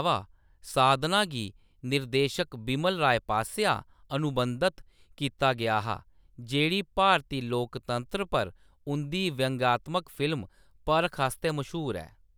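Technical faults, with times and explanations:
No technical faults can be heard in the speech.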